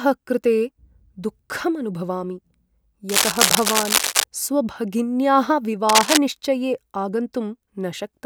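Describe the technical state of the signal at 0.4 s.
At 0.4 s the speech signal is intact, with no audible technical fault at that moment.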